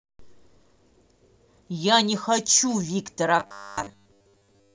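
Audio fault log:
3.40–4.74 s robotic sound from repeated short buffers: a rigid, metallic 100 Hz buzz, likely from one 10 ms buffer looping while most real audio is skipped. The spectrogram shows fixed 100 Hz harmonic stripes, and the waveform shows identical repeating cycles.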